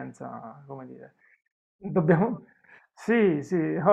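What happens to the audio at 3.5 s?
Nothing goes wrong at 3.5 s: the speech carries on intact through that moment, with no dropout, click or distortion.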